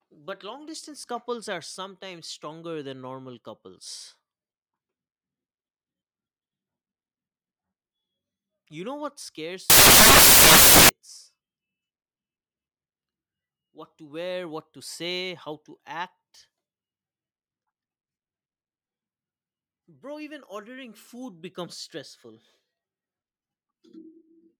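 From 9.70 to 10.89 s, just after "know what scares", samples built from the wrong bytes turn the speech into loud, harsh broadband noise, filling the spectrogram evenly.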